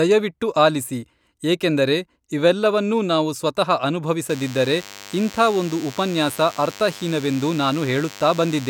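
A nearby DECT cordless phone or base station pulses its transmitter every 10 ms, and the audio circuitry rectifies those bursts into this speech recording. From 4.30 s, just after "ಏಕೆಂದರೆ ಇವೆಲ್ಲವನ್ನೂ ನಾವು ಸ್ವತಃ", DECT cordless phone buzz appears: a thin, steady 100 Hz buzz rich in harmonics, roughly 20 dB below the speech, lasting until 8.70 s.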